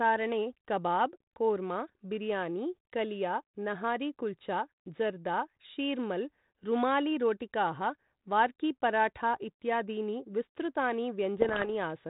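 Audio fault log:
11.38–11.71 s, bit errors on an ADPCM link: flipped bits derail the decoder's step size and predictor, so pops ring into rough bursts with level jumps, unlike plain clicks.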